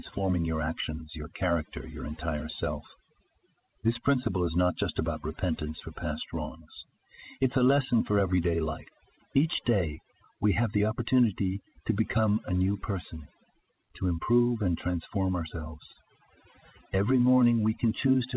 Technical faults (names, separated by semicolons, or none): overdone noise removal